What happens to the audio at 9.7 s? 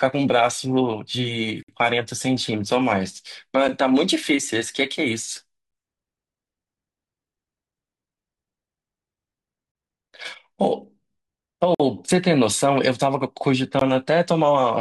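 At 9.72 s there's a gap between stream segments: the time stamps of two 2-second segments don't quite meet, so the player drops in about 31 ms of silence until 9.75 s. It's a hard-edged little hole in the speech, but nothing's actually missing.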